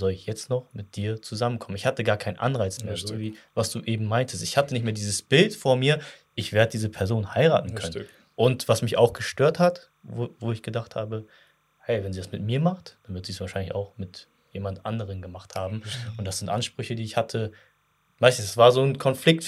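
Throughout the speech, faint timecode bleed adds a steady chirping warble. The square-wave code, running at 29.97 fps, sits far below the speech, switching near 1 and 2 kHz. A spectrogram shows continuous bands there.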